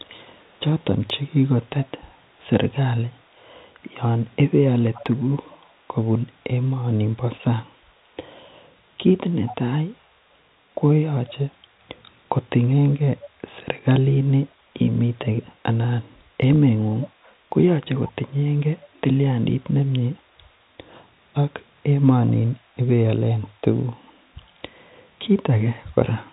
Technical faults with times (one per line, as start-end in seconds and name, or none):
0.04-1.91 echo leak
4.82-5.75 echo leak
9.46-9.56 echo leak
11.27-11.32 echo leak
13.22-13.28 echo leak
17.03-17.08 echo leak
22.27-22.33 echo leak
23.32-24.12 echo leak